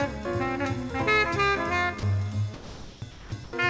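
A call's voice detector likely mistook parts of this audio for background and stopped sending, so the receiver filled the gaps with comfort noise. The result is sound dropped by the voice detector at 2.00–2.03 s, 2.54–3.02 s, 3.11–3.32 s and 3.44–3.53 s, where the audio gives way to steady noise before returning. Nothing reaches above 8 kHz, which fits a G.722 wideband call path.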